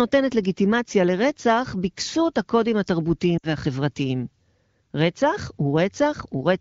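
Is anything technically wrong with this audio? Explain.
Yes. Between 3.37 and 3.47 s there are lost AMR speech frames. The gap lasts 60 ms, which fits three consecutive 20 ms frames. The decoder reuses the last good pitch and spectral settings at falling gain, so the speech smears, fades quickly toward silence, then returns briefly rough.

The AMR wideband (HD Voice) coding shows only light damage, consistent with a rate around 15.85 kbit/s.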